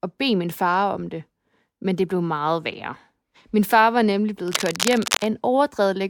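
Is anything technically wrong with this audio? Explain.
Yes. From 4.48 to 5.27 s there is cable scratch noise: dense, uneven rustling over the speech, only slightly quieter than it. It is likely a worn cable or connector being moved, its contact resistance flickering. Unlike isolated clicks, it forms dense, uneven bursts of scratching.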